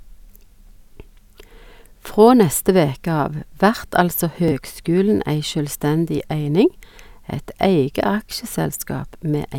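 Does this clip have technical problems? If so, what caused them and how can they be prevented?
Yes. There is a Bluetooth stutter in this speech at 4.48 to 4.52 s, just after "vert altså". Audio data over the wireless link failed to arrive in time, so the receiver replayed its last short buffer until fresh data came. About 23 ms of audio went missing, which fits a single lost packet, and the repeated slice is heard as a brief hiccup before the speech carries on slightly further along. Keeping the devices close, with a clear line of sight and less interference from other 2.4 GHz traffic, prevents these dropouts.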